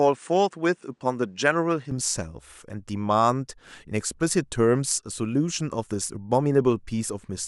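From 0 to 1.91 s the speech has nothing above 9.8 kHz and a faint separate noise floor, about 50 dB down. It then brightens with no gap or level jump. The likely cause is an input switched to a poorer device, here switching back to the fuller one.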